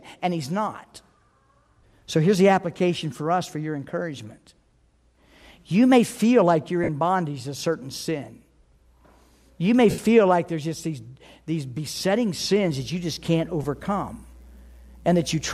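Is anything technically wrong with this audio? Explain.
Yes, the speech has three brief dropouts from lost LE Audio frames: at 6.84 to 6.89 s, between "may feel like you're" and "bondage to certain sin"; at 9.91 to 9.98 s, just before "like there's just these"; and at 13.63 s, right after "that you just can't". The gaps run about 45, 75 and 15 ms, which fits runs of 7.5 ms LC3 frames going missing. The decoder refills each gap from the last good spectrum with scrambled signs, so pitched sound turns into a short hiss-like smear. On a spectrogram, harmonic lines give way to blurred broadband patches. In the waveform, the periodic shape turns ragged for those stretches.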